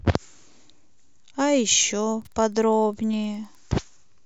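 A nearby Wi-Fi radio couples into the audio circuit from 1.58 s to 3.58 s, and the circuit rectifies its beacon transmissions, which repeat every 102.4 ms. This Wi-Fi interference is heard as a steady ticking just under ten times a second running beneath the speech for those two seconds. The ticks are faint, sitting far below the level of the speech, but their regular, mechanical rhythm makes them stand apart from it.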